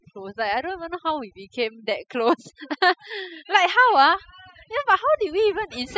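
Overdone noise removal runs through the whole clip, from start to finish. A noise reduction stage was pushed far too hard on a noisy speech recording: any frequency band sitting close to its noise estimate gets pulled down or gated off entirely, and the softer parts of the voice fall below that line too. The background collapses into near silence flecked with twinkling, chirpy specks.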